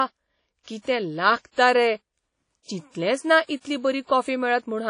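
Speech, carried throughout by a ringing, washy texture with hiss that swells and falls with the voice, and nothing above about 10.1 kHz. The codec damage is plainly audible. This is likely WMA compression at a low rate, which fits around 32 kbps, where long transform blocks smear noise and weak components are dropped. Unlike broadband tape hiss, the noise tracks the signal. Pre-echo appears from 0.63 to 0.67 s, just before "कितें लागता": a 43 ms hiss precedes the attack and softens it, because quantisation noise fills the block ahead of the onset. A reverb tail would instead follow the sound.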